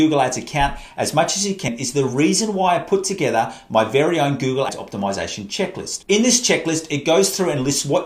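Compressed frames skipped at 1.68 s and 4.69 s: the audio jumps forward by roughly a tenth of a second, then about 150 ms, which fits whole 32 ms frames dropped by the decoder.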